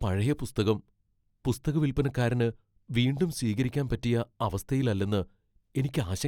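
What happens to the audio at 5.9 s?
Nothing goes wrong at 5.9 s; the speech carries on intact through that moment.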